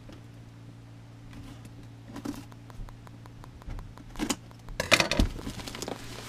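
From 2.16 s to 6.17 s a train of clicks runs over the sound: about twenty similar pops, evenly spaced at 5.5 per second and peaking a little above the programme, likely from outside interference. Their steady, repeated shape separates them from random crackle.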